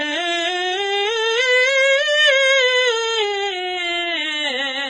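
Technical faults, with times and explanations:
Throughout, low-bitrate audio saved at a high bitrate: the music has nothing above about 9.5 kHz, with the smeared, swirly artefacts of a very aggressive encoder. The likely cause is a file first squeezed through a low-bitrate codec, consistent with something like AAC at 16 kbit/s, then re-encoded generously as MP3. A plain low-bitrate file would sound the same, but the container's high bitrate doesn't match the damage. Unlike a simple low-pass filter, the warbling shows lost detail that cannot return.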